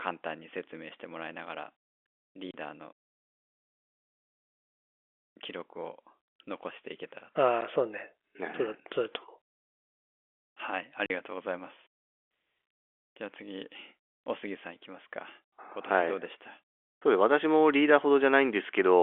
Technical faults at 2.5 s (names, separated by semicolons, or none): packet loss filled with silence